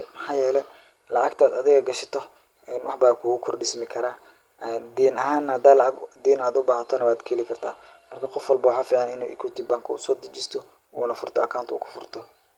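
Speech recording; no technical faults can be heard.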